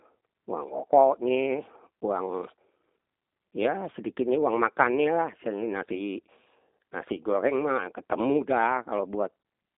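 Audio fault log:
Throughout, G.729 codec: the speech has passed through a low-rate CELP voice codec, and the sound fits G.729A at 8 kbit/s. Each short frame is rebuilt from a vocal tract filter, a pitch predictor and a few pulses instead of the original waveform. The line band runs from about 250 Hz to 3.7 kHz, with nothing above 3.7 kHz. That makes the speech thin and muffled, and the coarse model gives it a plainly audible rough, synthetic edge.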